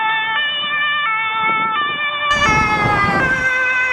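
From 0.0 to 2.31 s the input was likely switched to a poorer device with a narrower band. Nothing passes above 3.8 kHz, so the sound is dull, boxy and somewhat quieter over a faint new noise floor, then clears abruptly, with no gap.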